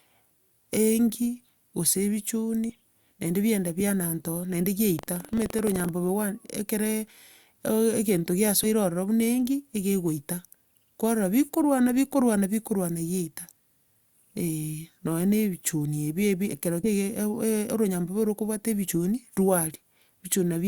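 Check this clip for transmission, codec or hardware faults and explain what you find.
Yes, there are two kinds of fault in this speech. Compressed frames skipped at 2.69 s (just before "naende biagenda biananta ororo"), 8.63 s, 16.83 s (after "ebi ekero") and 18.87 s: lost 20 ms frames jump the audio ahead, about 70 ms at the first and 40 ms at the others. Buffer tearing from 4.95 to 5.91 s, after "biagenda biananta ororo naende": the writer and reader cross inside each buffer, giving a rattly 23.4 Hz buzz that fits a 2048-sample buffer.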